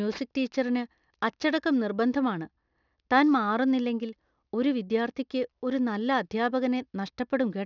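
Aliasing throughout: downsampling without filtering folded energy above 6 kHz back as gritty, metallic sibilants, and spectrogram energy runs hard to that edge, fitting a 12 kHz rate.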